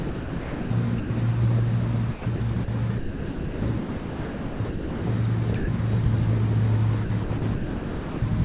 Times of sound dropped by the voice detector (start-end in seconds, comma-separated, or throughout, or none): 0.00-0.70, 1.00-1.10, 5.58-5.68